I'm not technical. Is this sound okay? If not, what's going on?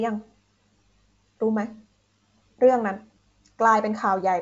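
Yes, this sound is okay: it's wideband phone-line speech, and nothing is going wrong in it.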